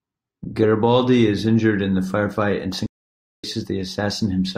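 A playback stall runs from 2.86 s to 3.44 s, most likely because the player's buffer ran dry or its output thread was held up, so nothing reached the output for about 0.57 s. In the sound, the speech simply stops partway through, leaving a hard gap of silence rather than a fade, and then the speech resumes once playback picks up again at 3.44 s.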